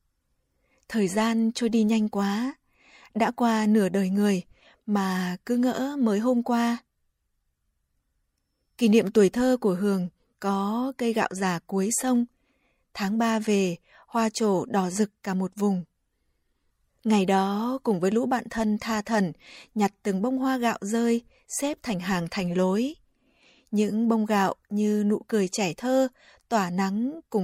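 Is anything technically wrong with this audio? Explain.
No, nothing is technically wrong with this audio.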